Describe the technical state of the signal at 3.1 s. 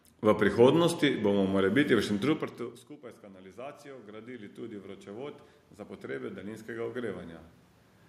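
At 3.1 s the level is climbing: voice and room noise swell together, a slow rise that runs from 2.96 s to 5.48 s and adds about 9 dB. This is automatic gain rising. Once the talker moved away from the microphone around 2.5 s, the input fell by about 24 dB, and the gain control responded by lifting its gain gradually. Because the boost applies to the whole signal, the background rises with the voice.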